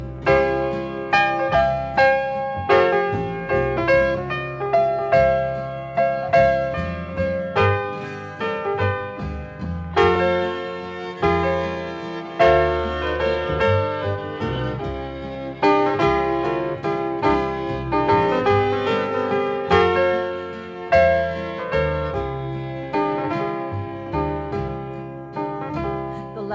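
Nothing goes wrong in this one, as there's no technical fault to point to anywhere in the recording.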